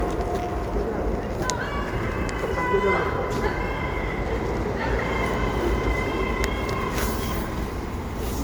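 Throughout the clip the sound is swirly, smeared and hollow, with blurred attacks: generation loss, likely from about ten rounds of MP3 encoding at 128 kbit/s. A spectrogram shows nothing above 19.9 kHz and patchy, flickering holes across the upper bands.

From 3.37 to 3.51 s a loud pop occurs as two sharp clicks about 10 dB above the surrounding sound, which continues underneath. This is likely a voltage spike from a plug, switch or static. The waveform shows two tall, narrow spikes, and the spectrogram shows two thin vertical stripes spanning the full band.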